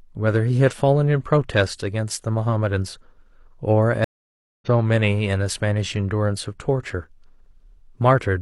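A speech clip with one stream reconnect fault. At 4.04 s the audio drops out and stays silent for about 0.58 s. It comes back at 4.68 s. The speech does not pick up where it stopped. It resumes at a later point, skipping roughly 0.4 s. The connection broke, the player waited, then reconnected. A fresh decoder started in mid-stream. The material sent during the gap was never played.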